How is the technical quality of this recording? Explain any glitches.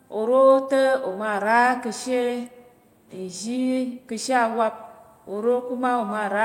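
Nothing in the signal misbehaves at any point, so there are no glitches here to explain.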